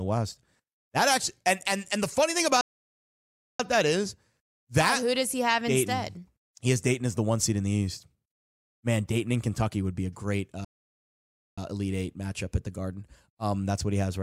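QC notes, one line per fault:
2.61–3.60 s and 10.65–11.58 s, playback stall: after "and the funny thing" and "would be a great", the speech cuts out for about 0.98 s and 0.93 s. The likely cause is the player running short of data or being blocked. The waveform flattens and the spectrogram shows a blank vertical band.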